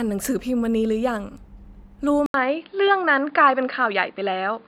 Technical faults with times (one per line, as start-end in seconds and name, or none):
2.26-4.68 input switched to a poorer device